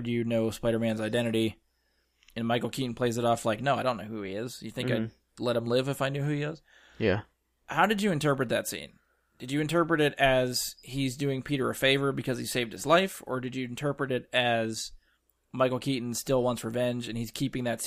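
Nothing goes wrong anywhere in this bit of speech, so there's no technical fault to point to along the way.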